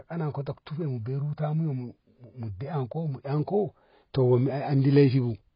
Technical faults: AAC compression

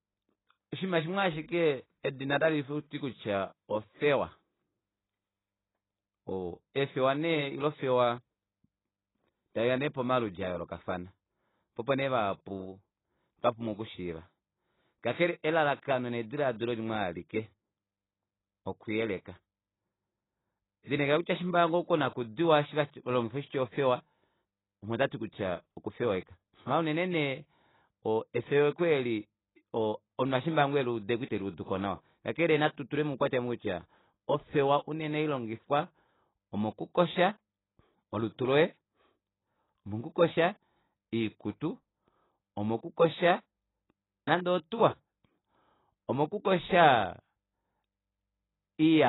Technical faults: AAC compression

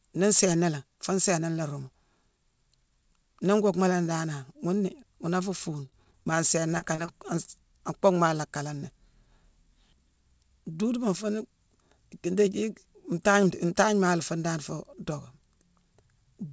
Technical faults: repeated packet loss (robotic sound); short concealed packet loss

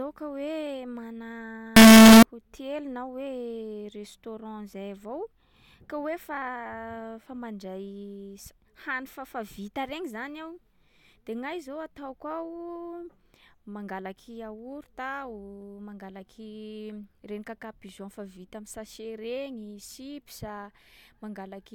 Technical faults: signed and unsigned mixed up

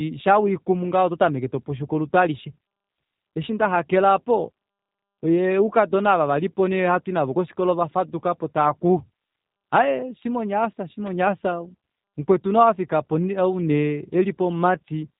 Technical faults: G.729 codec

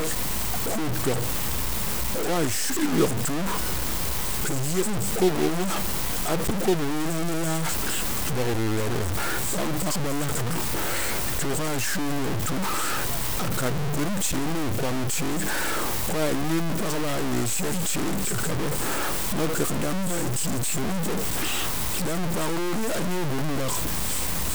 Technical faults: low bit depth without dither

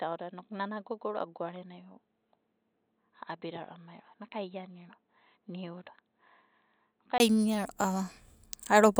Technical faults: input switched to a poorer device

